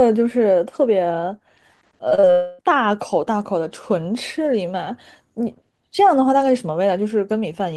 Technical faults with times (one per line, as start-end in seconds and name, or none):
2.09-2.25 short concealed packet loss
2.31-2.61 long network dropout